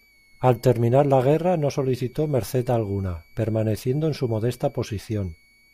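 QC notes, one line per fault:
Throughout, switching supply whistle: a faint high tone wandering between about 2.18 and 2.33 kHz, sitting well under the speech, from a switching power supply running in an audible burst mode or beating with another one.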